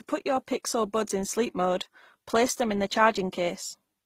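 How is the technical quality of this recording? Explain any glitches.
The speech is degraded by compression from start to finish, with layered codec artefacts. Throughout, transcoding between lossy codecs is likely: HE-AAC-style smearing sits under Opus-style roughness, and everything above 15.9 kHz is missing. A single low-bitrate codec would leave only one kind of artefact.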